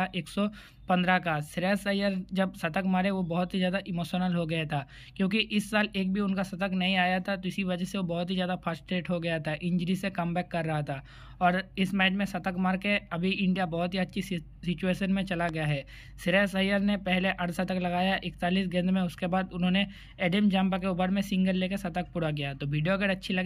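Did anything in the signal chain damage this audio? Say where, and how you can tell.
Yes. A single loud pop sits at 15.49 to 15.51 s, a sharp transient peaking roughly 10 dB above the surrounding signal. The underlying audio runs straight through it without interruption, so nothing was dropped or cut. The damage most likely entered in the analogue wiring, where a plug, switch contact or static discharge put a voltage step into the line, and the downstream circuitry shaped it into this brief pulse.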